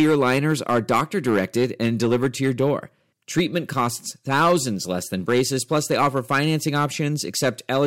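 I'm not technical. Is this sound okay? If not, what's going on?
No, there's hard clipping all the way through: the speech was pushed too loud, so the loudest moments get chopped flat, adding a harsh crackly edge.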